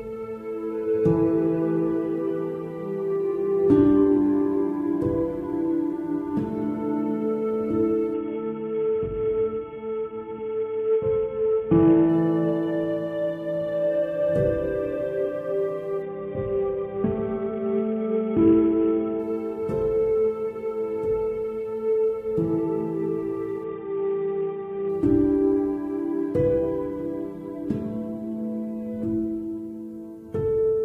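Three times the sound goes dull and gritty: 8.14 to 12.09 s, 16.02 to 19.19 s, and a shorter dip from 23.64 to 24.89 s. That's a Bluetooth SBC bit pool drop, with the link congesting and the encoder starving itself of bits. The top sub-bands lose their treble, and what's left gets coarsely quantised into that grainy hash. The depth of it fits a bit pool falling from 31 to 6, around 55 kbps.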